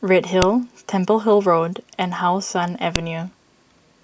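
At 0.42 s and again at 2.96 s, the speech has a sharp, loud click. This is a file header played as audio: joined pieces kept their header bytes, which sound as a snap.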